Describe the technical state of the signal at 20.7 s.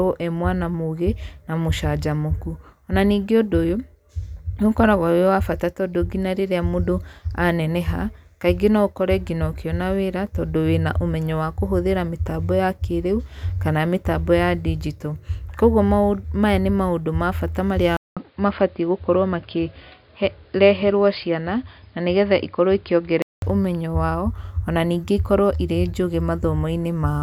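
Dull, boxy speech with nothing above 5 kHz, a faint new noise floor well below the signal, and a 200 ms gap at 17.97 s, lasting until 23.42 s. The likely cause is an input switched to a poorer device.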